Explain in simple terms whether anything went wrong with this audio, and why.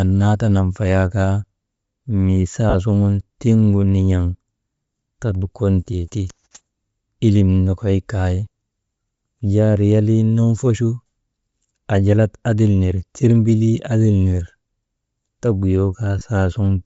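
Yes, two things went wrong. The whole speech sounds breathy and grainy, with the crisp top end smeared into hiss. That is Bluetooth LC3 compression, likely. This codec squeezes audio hard, throws away much of the high detail, and fills the gap with noise.

There are also two short dropouts. Lost LE Audio frames cause a brief noisy smear from 2.70 to 2.75 s and again from 16.19 to 16.21 s. The receiver missed pieces of the stream and patched them by reusing the last sound with scrambled detail.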